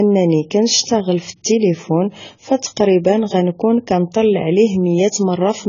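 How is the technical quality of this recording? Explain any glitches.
The recording is technically poor, with heavy coding damage throughout the speech. For the full length, the sound shows AAC compression artefacts: nothing above 7 kHz, a dull, smeared tone, and fizzy, warbling sibilants. The likely cause is AAC-LC at a very low bitrate, consistent with around 16 kbps, which forces the low cut-off and coarse spectral quantisation.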